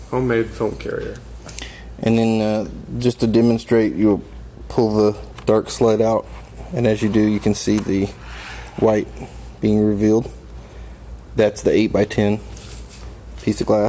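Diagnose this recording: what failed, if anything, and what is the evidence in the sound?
Nothing failed: no stage of the chain, from wiring through to playback, leaves an audible fault anywhere in the recording.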